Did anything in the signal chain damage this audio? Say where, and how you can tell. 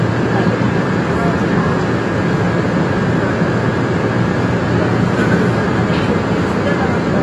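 Yes. The damage is at the codec stage and runs through the whole clip. Nothing is audible above about 12.1 kHz, so the top octave is missing and the sound is dull. The smearing and fizzy, warbling texture are plainly audible. The likely cause is AAC compression, of the AAC-LC kind. At a low rate, which fits about 32 kbps, the encoder cuts bandwidth and quantises coarsely. That leaves holes in the spectrum or fills bands with substitute noise.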